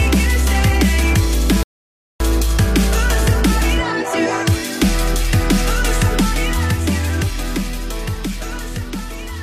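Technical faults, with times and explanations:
1.63 to 2.20 s, rebuffering stall: the sound drops to silence for about 0.57 s, then picks up exactly where it left off. The player ran short of downloaded audio and waited for more. No sound is missing. The clip simply runs longer.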